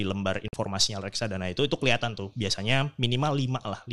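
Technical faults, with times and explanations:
0.48–0.54 s, digital broadcast dropout: the speech cuts to silence for about 50 ms and resumes on "reksadana itu itu kelihatan". The receiver stopped getting good frames, so it muted until valid data returned, and the audio carried in that span is gone. The hole fits roughly two lost frames. Unlike packet-loss concealment, nothing is smeared, repeated or synthesised to cover the gap. There is true silence, then normal sound.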